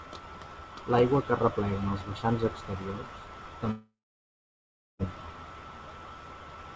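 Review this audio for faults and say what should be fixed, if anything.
From 3.71 to 5.02 s there's a stretch that's likely a long network dropout: the audio stops arriving, the receiver stretches the last sound into a fading buzz, then about 1.07 s of near-silence before speech comes back with roughly 1.3 s simply gone. Adding forward error correction and a bit more jitter-buffer headroom would help ride out gaps like this.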